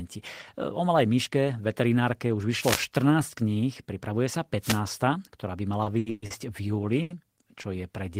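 A short swish of static cuts across the speech from 2.59 to 2.83 s, and again from 4.61 to 4.80 s, right after "pripravuje sa". These are wireless microphone noise hits: the FM radio signal faded as reflections cancelled it, and the receiver's hiss rose up over the voice.

From 5.83 to 6.33 s the speech drags and stutters in four stalls. Together they hold sound over for about 270 ms, more than half the span, and the longest lasts 120 ms. This is repeated stalls (stutter). Packets kept arriving late, so the jitter buffer ran dry again and again. Each time, the receiver extended the last sound until data returned, and nothing was lost.

At 7.02 to 7.13 s a sound is held about 80 ms too long. This is a short stall from a late packet: the delay jumped by 80 ms, the jitter buffer emptied, and the receiver stretched the last sound before resuming at the same point.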